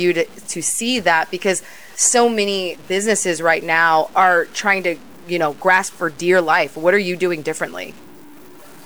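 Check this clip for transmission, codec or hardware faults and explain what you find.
One fault runs throughout the speech. Low bit depth without dither gives grainy distortion that tracks the voice. Quiet sounds turn gritty. Noise sits roughly 30 dB down. Likely cause: undithered truncation, fitting about 7 bits.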